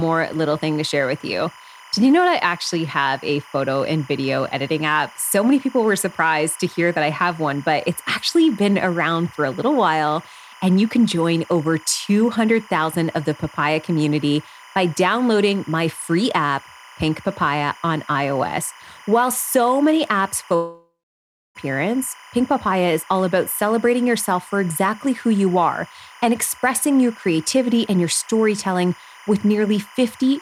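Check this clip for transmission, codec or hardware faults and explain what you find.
Two faults are present in the speech: timecode interference running through the whole clip, and one long gap where about a second of audio is lost.

Timecode bleed runs from start to end. Linear timecode from a neighbouring track or cable has leaked in, heard well below the speech as a chirping warble flipping between about 1 and 2 kHz. Unlike a steady whistle or hum, it has a rhythm locked to 25 frames per second.

A long network dropout begins at 20.55 s, right after "so many apps", and lasts until 21.57 s. About a second of audio never arrived, likely because packets were lost in transit. The receiver stretches the last sound into a fading buzz, then about 0.64 s of silence follows. Speech resumes with that part missing. The decaying buzz and the skipped material set it apart from a brief click or a natural pause.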